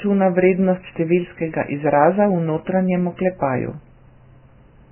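Heavy lossy encoding, likely Vorbis compression at a very low quality setting, runs through the whole speech clip. The codec has thrown away everything above about 3.1 kHz and quantised what remains so coarsely that fine spectral detail has been replaced by noise of similar energy. The result is dull, band-limited speech with a grainy, hissy texture, roughened vowels and smeared consonant attacks, damage that fits a bitrate around 10 kbps.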